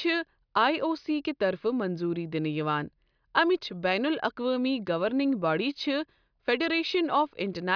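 No technical faults can be heard anywhere in the speech recording; the signal stays continuous and steady throughout.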